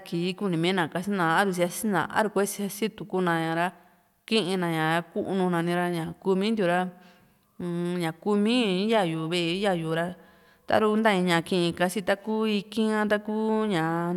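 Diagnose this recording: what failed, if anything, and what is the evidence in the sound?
Nothing in this speech recording points to a failure at any stage of the chain, with no audible event to tie to wiring, conversion, buffering, processing, transmission, storage or playback.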